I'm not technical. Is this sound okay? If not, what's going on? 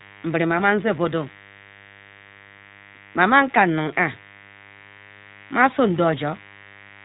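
No. Two problems run through the whole clip, from start to finish.

First, mains buzz: electrical interference from the 50 Hz power supply, probably from a poorly shielded cable or a nearby dimmer, leaked into the recording. You hear it as a steady, raspy hum sitting underneath the speech.

Second, the speech passed through the iLBC codec, a phone-call compression system that processes the sound in small 20 ms chunks and discards everything above 4 kHz. This makes the voice sound muffled and noticeably rough, slightly robotic.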